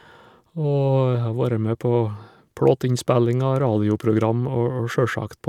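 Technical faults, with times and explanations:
Nothing stood out as a technical problem on listening to this speech recording.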